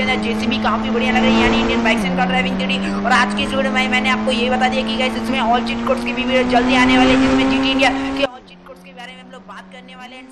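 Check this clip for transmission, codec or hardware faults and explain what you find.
One fault stands out near the end. From 8.26 s to 10.32 s the sound collapses to about 19 dB quieter, with its centre gone. The likely cause is one channel inverted: reversed polarity makes the shared content cancel when the channels sum to mono. Unlike a dropout, what remains is a faint residue rather than silence.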